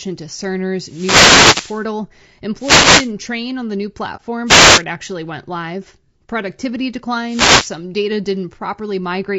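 Throughout the speech, the voice is rough and grainy, with noise filling the gaps between harmonics and a thin, synthetic-sounding top band. This is likely low-delay AAC compression (AAC-ELD) at a low bitrate, around 32 kbps. Its short frames resolve pitch harmonics poorly. On a spectrogram, the harmonic lines look smeared, the spaces between them are hazy, and the upper band looks patchy.

A wireless microphone noise hit runs from 0.82 to 1.87 s. The radio signal faded, receiver noise rose, and it is heard as a swish of static. On a spectrogram this appears as a broadband grey wash covering the harmonics, and the waveform looks fuzzy and noise-filled. A second hit follows at 2.57 to 3.12 s, ending just before "train on the new".

Right after "train on the new", at 4.16 to 4.21 s, there is AAC frame loss with muting. About 30 ms is missing, which fits a single lost frame whose spectrum the decoder zeroed. 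The sound fades out and back in. The waveform shows a short, soft-edged dip to silence, and the spectrogram shows a thin blank vertical gap.

Further noise hits occur at 4.45 to 4.82 s, before "actually went live", and at 7.24 to 7.75 s. Each sounds like the earlier static bursts and shows the same broadband smear.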